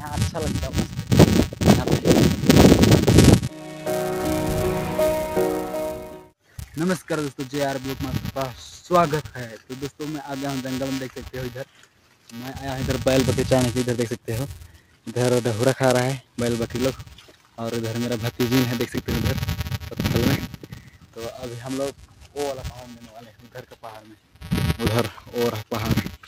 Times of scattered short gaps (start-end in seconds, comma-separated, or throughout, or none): none